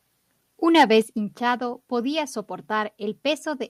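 From 0.75 to 0.84 s, the speech distorts with a harsh, crackling edge. This is microphone overload, likely from input gain set too high, with peaks about 5 dB over the limit.

At 1.02 s, just before "hinchado podía", voice and background drop together by about 6 dB. The microphone volume was likely stepped down by the call software.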